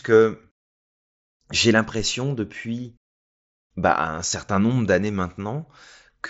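No faults can be heard anywhere in this speech.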